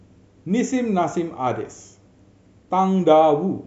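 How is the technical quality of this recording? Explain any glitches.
The technical quality of this recording is good, with no glitches to explain.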